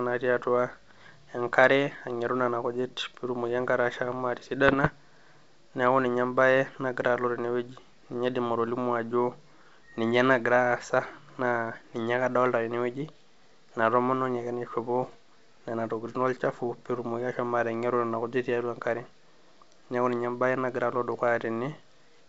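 Around 4.68 to 4.89 s, and again from 15.03 to 15.15 s, the speech breaks into pops and short rough bursts with quick jumps in level. That's bit errors on an ADPCM link, at a rate somewhere under one percent. Each flipped bit throws off the decoder's step size and prediction, so the damage smears on briefly instead of clicking once. Around it, the G.722 wideband coding sounds clean and clear up top.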